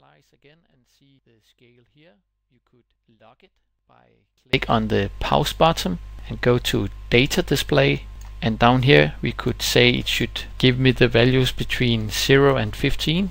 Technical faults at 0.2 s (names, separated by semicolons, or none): audio dropout to a faint residue